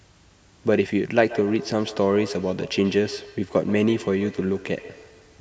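Feedback echo between two devices runs from 1.19 s to the end: a second nearby device replays the speech into the microphone, returning it roughly every 150 ms, about 15 dB down, thinner and ringing.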